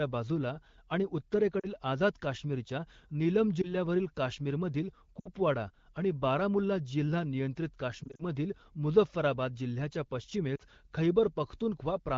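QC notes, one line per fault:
1.60–1.66 s, lost AMR speech frames: after "बाजूला आणि", about 40 ms of sound is missing, which fits two 20 ms frames. The decoder repeats the last good pitch and vocal tract settings at falling gain, so there is a short smeared dip before "आझाद काश्मीरच्या नीलम".
3.62–3.75 s, lost AMR speech frames: after "आझाद काश्मीरच्या नीलम", a 20 ms gap, consistent with a single frame, is concealed by the decoder. It gives a brief warble, and the sound returns rough for a moment.
5.19–5.29 s, lost AMR speech frames: about 60 ms is lost, pointing to three frames. The concealment repeats the last sound with falling gain, so it drops to near silence within two frames.
8.04–8.24 s, lost AMR speech frames: 100 ms of losses are scattered over 160 ms, with runs no longer than 40 ms. The repeated short concealments produce a series of brief dips and warbles instead of a clean fade to silence.
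10.56–10.62 s, lost AMR speech frames: after "मुझफ्फराबाद जिल्ह्याच्या", a 40 ms hole, matching two frames, is filled by decaying repeats. It comes across as a quick dip through the AMR-WB codec's light 12.65 kbit/s coloration.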